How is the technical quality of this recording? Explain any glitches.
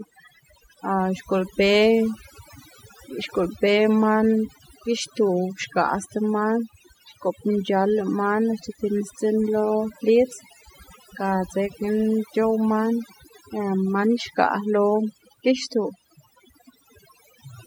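The recording has been damaged by overdone noise removal, present from start to finish. A noise reduction stage set far too aggressively compares each frequency band against its noise estimate and pulls any band that comes close down hard or shuts it off, and the quieter parts of the speech fall below that line too. The gaps between phrases sink to near silence dotted with twinkling specks.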